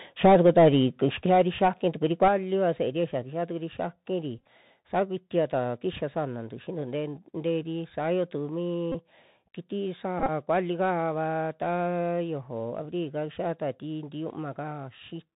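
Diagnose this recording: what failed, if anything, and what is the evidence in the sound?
The codec stage is a Bluetooth CVSD headset codec at 64 kbps, heard throughout. As a narrowband codec it passes nothing above 4 kHz, so the speech is muffled and narrowband. The step size lags on loud, bright sounds, leaving scratchy sibilants and a granular hiss underneath.

At the converter, microphone overload is evident from 0.24 to 0.68 s, with peaks about 5 dB past full scale and a good share of samples flattened, and again at 2.22 to 2.28 s, about 2 dB over. The likely cause is excessive input gain, and the squared-off peaks give those syllables a harsh crackle.

Call processing reacts with the microphone volume stepped down in abrupt jumps: about 2 dB at 0.26 s, about 5 dB at 1.26 s, about 5 dB at 2.28 s right after the second overload, and about 2 dB at 3.3 s. This is likely automatic gain control cutting the device input, so voice and background drop together.

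On the radio link, Bluetooth headset packet repeated faults appear at 4.38 to 4.45 s, with 37.5 ms lost in scattered runs, at 8.92 to 8.95 s with 22.5 ms, and at 10.19 to 10.30 s with 56 ms. Re-decoding the last 3.75 ms packet gives brief buzzy stutters near 267 Hz, longest around 30 ms.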